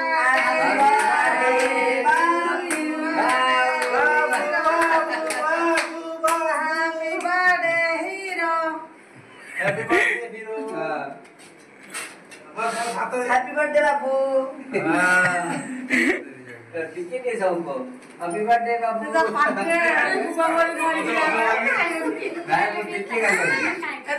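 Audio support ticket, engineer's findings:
Hard clipping, present throughout. Brief crackle on peaks only, not continuous fuzz: overdrive about 3 dB, well under one percent of samples flattened. A stage in the chain is running out of headroom. Edges are abrupt, unlike a limiter's rounded compression, with added high harmonics.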